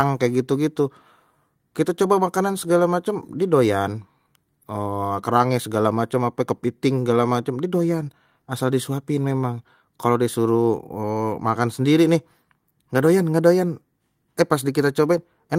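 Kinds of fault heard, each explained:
No technical faults heard.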